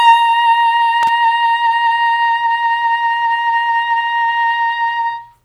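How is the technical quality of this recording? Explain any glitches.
The recording has one glitch, a short burst of loose connector crackle from 1.03 to 1.09 s in the music. A worn or dirty contact in the signal path briefly loses and regains connection, chopping the signal on and off, which comes through as an irregular scratchy crackle lasting roughly 60 ms.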